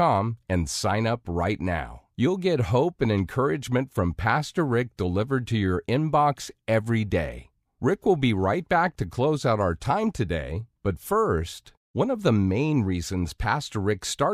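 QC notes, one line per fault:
Throughout: crude rate conversion. The speech was resampled upward by a ratio of about 1.38, consistent with a 32 kHz source brought to 44.1 kHz, using what sounds like plain linear interpolation with no anti-imaging filter. Straight-line guesses between samples leave an error that repeats with the beat between the two rates, producing inharmonic tones sitting roughly 35 dB below the speech. These are heard as a faint gritty fizz that rides on louder and brighter syllables.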